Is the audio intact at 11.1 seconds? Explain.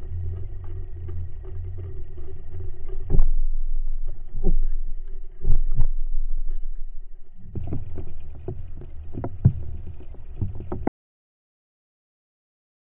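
No. An audio dropout to silence runs from 10.88 s to the end of the clip, so 11.1 s falls inside it. The sound cuts off abruptly mid-flow and never returns; what follows is silence with no room tone or noise floor. The likely cause is that the input signal was lost, through a disconnected device, a failed link or an accidental mute, while the recorder kept writing silence, so anything after the cut is missing.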